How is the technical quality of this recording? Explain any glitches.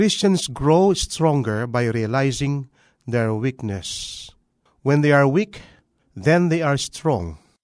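No glitches can be heard anywhere in the recording: the speech signal stays continuous and intact throughout.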